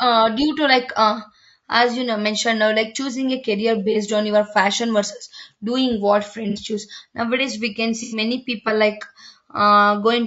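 Throughout, the speech sounds rough and grainy, with noise filling the gaps between harmonics and a thin, synthetic top band. This is likely low-delay AAC compression (AAC-ELD), whose short frames resolve pitch poorly, and the damage fits a bitrate of about 32 kbps.

AAC frame loss with concealment occurs at 3.92–3.97 s, 6.50–6.59 s and 8.03–8.17 s. The decoder rebuilds each missing stretch from the last good spectrum. The resulting 30, 60 and 90 ms gaps, which fit one, two and three lost frames, sound like progressively longer smeared, noisy patches.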